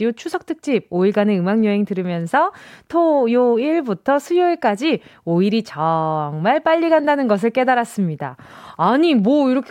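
No technical faults are audible anywhere in the recording.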